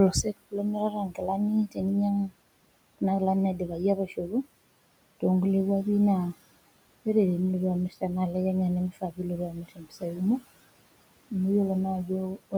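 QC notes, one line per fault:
Throughout, noise suppressor artifacts: the background gets pulled down by about 21 dB between phrases and swells back under speech.
0.12–1.84 s, 3.55–4.46 s (right after "kuna kilani"), 8.91–10.43 s, 12.06–12.54 s, speech cut by the noise suppressor: soft bits got mistaken for noise and ducked, up to about 22 dB, about 11 dB in the second spot, so they sound swallowed or faint, over roughly 0.7 s, 0.3 s, 0.7 s and 0.1 s.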